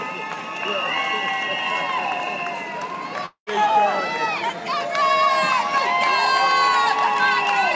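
At 3.26 s the sound smears into a fading buzz, goes quiet for about 90 ms, then picks up at 3.50 s with roughly 0.2 s simply gone, which is likely a long network dropout that the receiver papered over. The band-limit at 8 kHz fits a wideband call codec.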